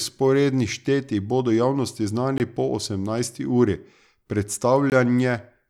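It's a speech clip with gaps between chunks: hard-edged 20 ms holes at 2.38–2.40 s, just before "po osemnajsti uri", and 4.90–4.92 s, from silence inserted at each 2.5 s chunk join.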